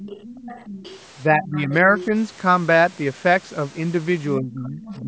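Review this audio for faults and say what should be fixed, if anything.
Other side's voice leaking through, 0.0–1.0 s, 1.45–1.59 s, 1.95–2.05 s and 4.85–5.02 s: a faint second voice about 15 to 25 dB under the speech, likely loudspeaker echo the canceller left behind. Prevent it with headphones or a better-tuned echo canceller.

Speech suppressed in double talk, 1.3–1.94 s, 4.37–4.81 s and 4.99–5.08 s: the voice dips by up to about 20 dB while the other side talks, likely the canceller ducking both sides together. Prevent it with a canceller that keeps the near voice during double talk.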